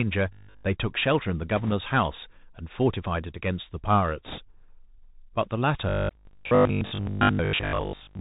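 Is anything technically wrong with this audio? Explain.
Yes. The speech carries three distinct faults.

Throughout, the Bluetooth CVSD headset codec limits the audio. It encodes one up-or-down bit per sample at 64 kHz with an adaptive step, so nothing above 4 kHz survives. Sibilants sound scratchy, loud bright passages distort, and granular hiss sits underneath.

From 0.33 to 0.67 s and again from 5.89 to 8.19 s, there is robotic sound from repeated short buffers. The likely cause is audio arriving too late, so the same short chunk is replayed and most of the real signal is skipped. That imposes a rigid 50 Hz buzz, which fits a 20 ms repeated buffer.

From 1.56 to 1.73 s and from 4.26 to 4.39 s, there are bit errors on a Bluetooth voice link. These are flipped bits in the CVSD stream, at roughly 2 percent and 3 percent. Each bit carries little weight and errors decay, so they produce a rushing crackle rather than sharp clicks.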